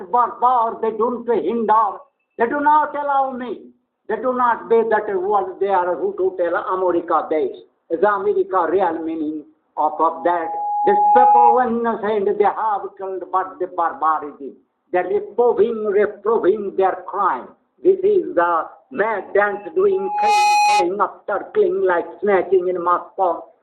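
Loudspeaker feedback squeal appears twice, at 9.83 to 11.69 s and 19.91 to 20.90 s, both times as a single tone near 830 Hz. The microphone is picking up its own loudspeaker, and at that frequency the loop gain exceeds one. Unlike a steady interfering tone or hum, it swells on its own. The first takes about one and a half seconds to rise to about 10 dB above the audio. The second builds in about 0.4 s and peaks around 5 dB.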